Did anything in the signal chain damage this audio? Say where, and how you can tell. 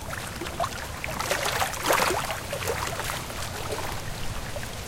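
Yes: a likely dropped buffer (overrun) at the driver or buffer stage. The sound skips ahead at 0.72 s, losing roughly 70 ms, then about 20 ms each at 2.07, 3.00 and 3.92 s. Samples were overwritten before being read, so the two sides join directly, without silence.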